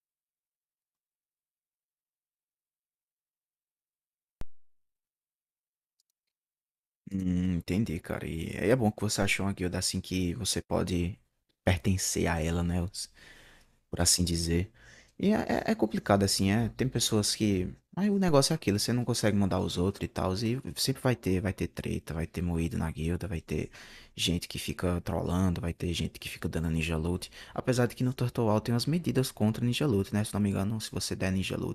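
DC steps at 4.41, 9.22 and 18.28 s interrupt this speech recording. Each time the waveform's zero line jumps by about -27 dBFS (about -26 dBFS at 18.28 s), producing a low thump. The offset then decays away through a 2 Hz high-pass while the speech continues unchanged.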